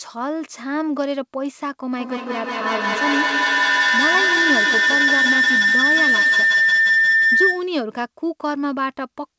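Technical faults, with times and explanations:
1.98 to 7.79 s, feedback howl: two devices in the same room share the call, so the loudspeaker's output re-enters the microphone and comes back louder on each trip. Instead of decaying, the repeats pile up and narrow to the loop's favoured frequency, a tone around 2 kHz, with repeats coming roughly every 150 ms at the loop delay. It peaks about 7 dB above the speech and persists until the loop breaks, all within the call path's 8 kHz band limit.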